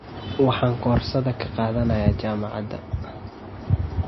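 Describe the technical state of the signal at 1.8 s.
At 1.8 s the speech carries damage that runs through the whole clip. Nothing sounds above 5.8 kHz, and the sound is plainly watery and swirly. The likely cause is MP3 compression at a low bitrate, around 24 kbps. The encoder cuts the treble and zeroes weak frequency lines.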